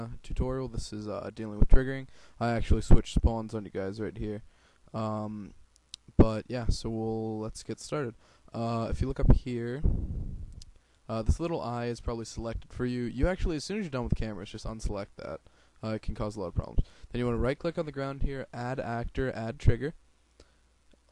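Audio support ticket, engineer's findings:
Nothing stood out on listening that would need to be logged against this ticket.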